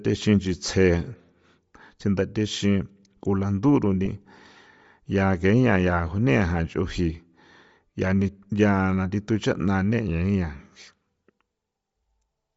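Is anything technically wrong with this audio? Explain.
Yes. Two problems are audible in this speech clip.

Throughout the clip, the speech has a breathy, grainy sheen in the upper range, and the high frequencies sound hashy rather than detailed. The likely cause is Bluetooth LC3 compression at a low bitrate, roughly in the 32 kbps region. At that rate the transform codec discards much of the upper spectrum in each short frame and fills the gaps with shaped noise. That noise fill is what gives sibilants and breath their coarse, plainly audible texture.

At 4.05 s there is a brief lost LE Audio frame, a dropout of about 7.5 ms, consistent with a single LC3 frame failing to arrive. The decoder conceals the gap by repeating the previous frame's spectrum with randomised phase signs. The speech is briefly replaced by a short noisy smear instead of a clean continuation. The gap is too short for the concealment to fade toward silence, so it registers as a quick rough blip.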